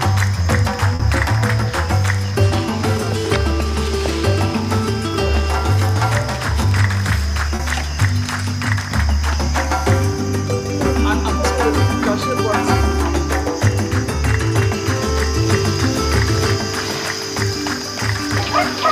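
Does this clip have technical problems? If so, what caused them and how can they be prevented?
Yes, there is short concealed packet loss, twice: at 0.95 to 1.02 s and at 7.55 to 7.62 s. Each time, about 40 ms of audio arrived too late for the decoder, and the receiver filled the gap by extending the preceding sound, either its pitch or shaped noise, before blending back into the real signal. Each event sounds like a brief smear or wobble, and anything short in that window can disappear. A larger jitter buffer, forward error correction, or a more stable network connection would prevent it.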